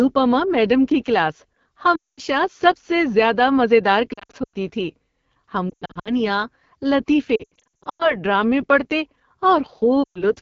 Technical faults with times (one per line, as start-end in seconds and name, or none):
0.00-10.42 AMR wideband (HD Voice) codec
1.95-2.20 lost AMR speech frames
4.13-4.56 lost AMR speech frames
5.70-6.23 lost AMR speech frames
7.36-8.20 lost AMR speech frames
10.03-10.24 lost AMR speech frames